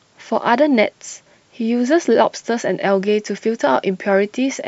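No technical faults are audible anywhere in the recording.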